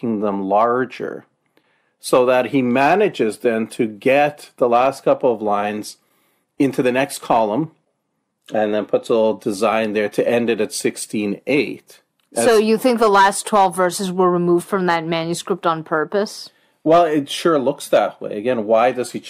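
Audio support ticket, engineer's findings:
No technical faults found in the speech signal; it runs continuously with no dropouts, level jumps or other artefacts to attribute to any component.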